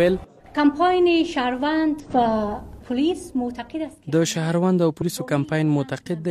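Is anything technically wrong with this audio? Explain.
Yes. There is damaged data in a compressed stream at 2.00–2.05 s and 4.97–5.03 s. Corrupted bytes made the decoder misread those frames and lose sync until it found the next frame header, leaving brief glitches of about 50–60 ms each.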